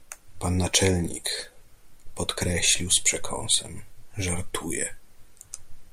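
A gain stage or converter was driven about 2 dB past its limit from 3.52 to 3.55 s, so the speech peaks there were cut flat by hard clipping. The squared-off tops add high harmonics, heard as a brief crackle on that loud moment.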